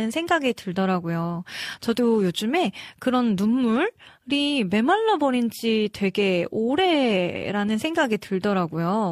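No technical faults can be heard anywhere in the recording.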